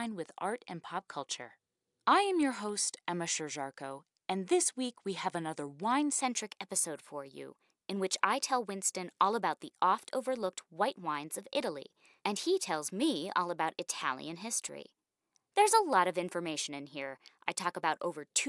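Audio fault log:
6.21 s to the end, wrong sample rate: Just after "we have another wine", the speech turns slightly hurried and higher. Speed rises by a factor of about 1.09 and pitch by about 1.5 semitones, together. The recorded samples are being read out faster than they were captured, with no rate conversion. That links tempo and pitch in one fixed ratio. The shift fits audio recorded at 22 kHz but played back at 24 kHz.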